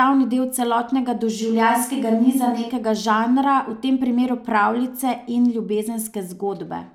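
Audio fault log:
1.43–2.69 s, switch to a distant microphone: the close microphone likely dropped out after "del celotnega", so speech turns abruptly roomy, hollow and bass-light at a similar level until "žanra v tem primeru".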